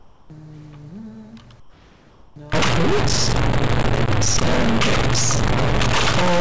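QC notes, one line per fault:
0.00–0.30 s and 1.60–2.36 s: comfort noise in place of the background. The real room tone gives way to a smooth, featureless hiss, about 7 dB quieter in the first stretch and about 4 dB in the second. This is likely discontinuous transmission, where the receiver synthesises shaped noise while the sender stays silent.
2.53 s to the end: stuck bit. Distortion rides on everything, and quiet moments fill with a noise floor instead of falling away. One data bit is likely held at a fixed value, so roughly half the samples carry an offset that follows the waveform's shape and sign. The nothing-above-8 kHz ceiling from the call codec sits beneath both faults.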